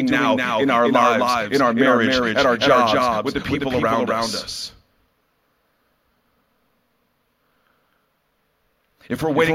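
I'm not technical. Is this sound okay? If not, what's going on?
No. A doubled audio track runs through the whole clip: every bit of the speech is heard twice, with the second copy arriving about a third of a second after the first and just as loud. The repeat is an exact copy, not a natural echo, so it doesn't fade or sound like a room. The likely cause is the same sound being recorded twice, once through a slower route, or an edit that left two copies slightly out of step.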